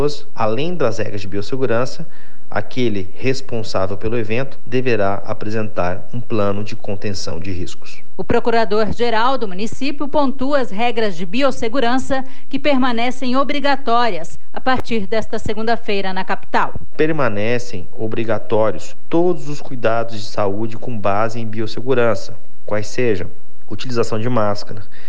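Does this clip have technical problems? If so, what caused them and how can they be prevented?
Yes. A DC offset runs through the whole clip, shifting the waveform away from zero by a constant of about -11 dBFS. It is inaudible as such, but it eats headroom and appears as steady energy at 0 Hz. A high-pass filter or DC-blocking stage before recording prevents it.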